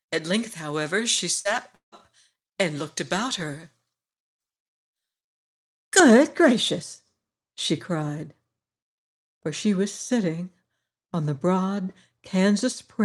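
From 0.0 s until 6.0 s, just before "gracious she cried", pre-emphasis was left on: the treble lift applied for recording or transmission never received its matching cut on playback. The result is about 11 dB more level at 10 kHz than at 1 kHz, a tilt consistent with a J.17-style curve. The speech sounds thin and glassy, with sibilants that hiss and spit well above the body of the voice.

At 1.39 to 1.48 s, a burst of packet loss occurs. A short run of data failed to arrive in time, so the receiver extended the last sound it had for about 54 ms while lowering its level. This is heard as the last sound briefly held and fading. About 60 ms of the original is gone, and the speech restarts a little further on with a small jump.

From 1.75 to 1.95 s comes a longer break, likely a long network dropout in which nothing reached the receiver for a while. Concealment stretched the last sound for about 170 ms, fading it down, and roughly 120 ms of that stretch is close to silence. 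When the speech returns, about 180 ms has been skipped, so it resumes mid-stream rather than picking up where it stopped.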